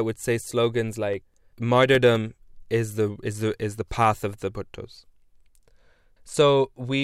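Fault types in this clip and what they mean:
CD scratch ticks: a scratch on the disc wipes out more data than error correction can repair, once per revolution, so the player patches or mutes those samples. Here that's eleven tiny clicks, the longest about 3 milliseconds, about five a second from 0.32 to 2.36 s.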